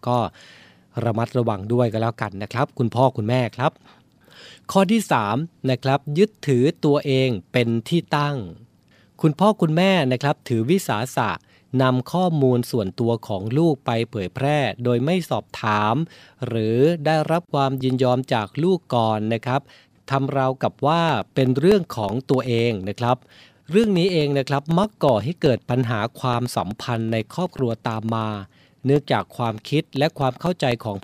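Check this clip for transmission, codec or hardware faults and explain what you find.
There is one fault: periodic USB or driver dropouts. From 21.09 s to 30.97 s, the speech is broken by ticks every 0.125 s, eight per second, about seventy in all. Each one is a gap of around a millisecond, filled with silence. Something is blocking the USB bus or the audio driver on a fixed cycle, so a sliver of audio is lost each time. The abrupt cut-outs make small, even clicks. They are heard under the speech, wherever there is signal.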